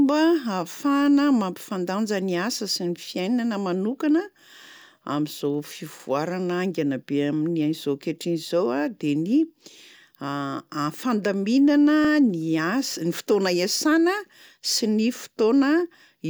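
At 6.00 to 6.05 s, just before "haingana be amin'izao", and again at 12.05 to 12.10 s, the speech stutters as a 50 ms sliver plays twice. These are overlapping chunks: the audio was handled in 6 s blocks, each starting 50 ms before the previous one ended. On the waveform, each join shows a duplicated stretch with a discontinuity; a spectrogram shows a thin vertical line and the same short pattern repeated side by side.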